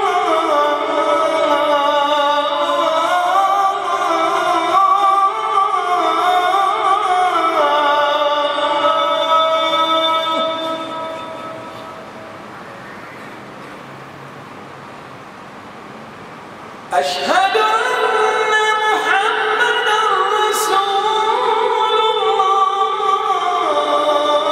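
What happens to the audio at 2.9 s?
Nothing goes wrong at 2.9 s; the audio plays through that moment intact, with no dropout, click or other fault.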